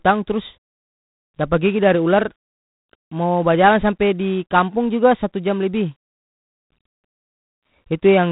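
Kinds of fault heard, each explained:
G.726 ADPCM: a harsh, rasping hiss rides on the speech and swells with its level, nothing above 3.8 kHz; coarse adaptive-difference coding, fitting 24 kbit/s.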